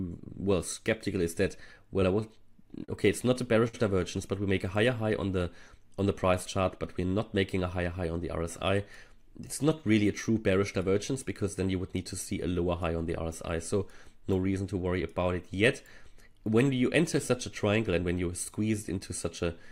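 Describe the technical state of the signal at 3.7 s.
At 3.68 to 3.75 s there is a short stall from a late packet: the jitter buffer ran dry, so the last sound was stretched for about 52 ms, with a slight buzz or dip, until the packet arrived. Playback then resumes where it left off, nothing skipped, unlike a lost packet.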